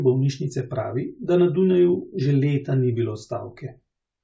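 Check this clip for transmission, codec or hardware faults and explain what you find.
No transmission, codec or hardware faults are audible anywhere in this speech recording.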